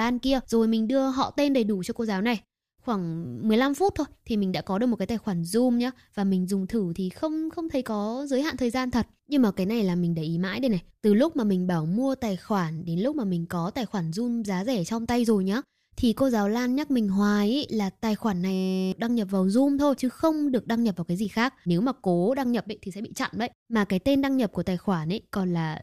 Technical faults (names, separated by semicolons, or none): system hang loop